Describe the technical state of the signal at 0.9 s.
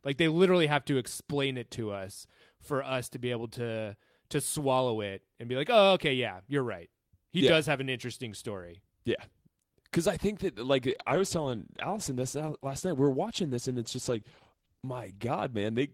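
At 0.9 s the speech signal is intact, with no audible fault at that moment.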